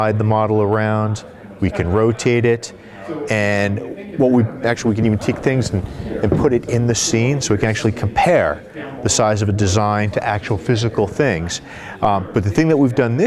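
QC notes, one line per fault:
No technical faults can be heard; the signal stays continuous and stable from the first moment to the last, with nothing to flag.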